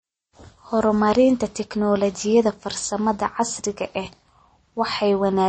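Throughout the speech, the treble stops abruptly at 8.3 kHz and the sound has a watery, swirling quality with smeared consonant attacks. This is likely MP3 compression at a low bitrate, which fits about 32 kbps: weak frequency lines drop in and out between frames.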